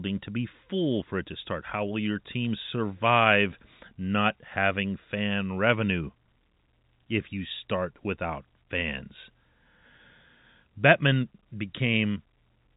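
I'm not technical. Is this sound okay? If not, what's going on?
Yes, nothing is wrong: this is ordinary phone-line speech carried by standard G.711 telephone coding, which passes nothing above 3.8 kHz and so sounds a little narrow and muffled by design.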